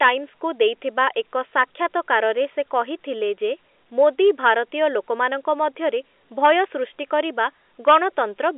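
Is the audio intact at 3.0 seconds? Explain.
Yes, the audio is intact at 3.0 seconds: the speech there carries no fault, only the narrow band of the G.711 telephone coding, which passes nothing above about 3.8 kHz.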